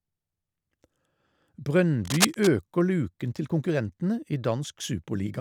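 From 2.04 to 2.47 s, just before "luken til konkurrentene i", cable scratch noise rasps over the speech at roughly the level of the speech itself, likely from a worn cable or connector shifting contact. A spectrogram shows dense, ragged broadband streaks, and the waveform shows jagged spikes.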